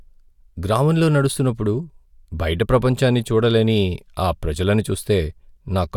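No technical faults can be heard anywhere in the speech recording.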